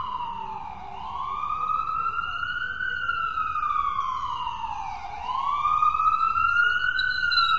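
Throughout the clip the sound is rough and grainy, with plainly audible codec damage and nothing above 7.6 kHz. This is likely low-delay AAC compression (AAC-ELD), whose short frames resolve fine detail poorly and spend bits fast, which fits a bitrate around 24 kbps.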